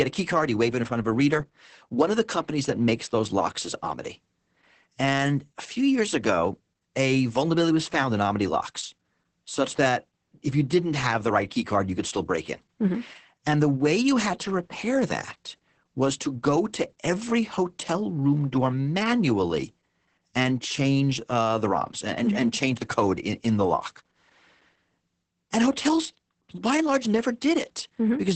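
Across the whole clip, Opus voice compression removes everything above 8.6 kHz, a blank band on the spectrogram, and its coarse coding leaves speech muffled, hoarse and faintly robotic.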